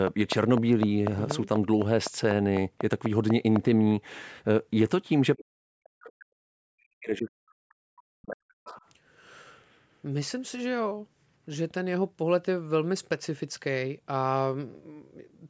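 A repeating pulse, likely interference from nearby equipment or a faulty connection, produces a train of clicks from 0.07 to 3.57 s. About fifteen clicks arrive at a regular 4 per second, each standing roughly 15 dB above the speech, ticking steadily over words and pauses alike.

From 5.37 to 8.71 s, the echo canceller likely mistook simultaneous talk from both ends for its own loudspeaker echo. The result is speech suppressed in double talk: the near talker's speech dips and breaks up for around three seconds in total, at worst falling about 40 dB.

Between 8.66 and 8.86 s, residual loudspeaker sound likely escaped echo cancellation. This is the other side's voice leaking through: a brief scrap of the far talker sitting roughly 20 dB below the near speech, overlapping the tail of the suppression.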